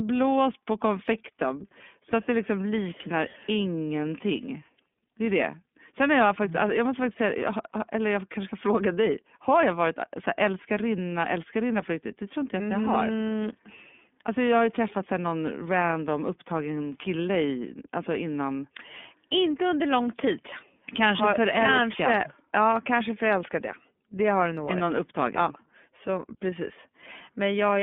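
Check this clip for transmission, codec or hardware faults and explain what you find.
One codec fault runs through the whole speech clip: iLBC codec coding. The audio sits on a narrow telephone line from about 200 Hz to 3.5 kHz. Each 30 ms frame's excitation is coded independently of the previous frame, which fits iLBC's 13.33 kbps mode. The damage is plainly audible as a rough, slightly synthetic buzz on the speech. Plain band-limiting would sound muffled but smooth. Here the frame-by-frame graininess gives away the codec.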